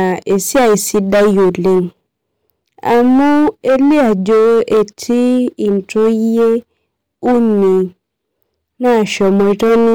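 Speech, with hard clipping running through the whole clip: the signal was pushed about 14 dB past what a stage in the chain could pass, so roughly one sample in seven is sliced off at the ceiling and every louder syllable turns into a harsh fuzz. In the waveform the peaks sit as flat plateaus. On a spectrogram, dense harmonic smear climbs high above the speech energy wherever the level rises.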